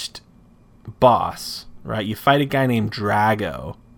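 No technical faults can be heard anywhere in the recording.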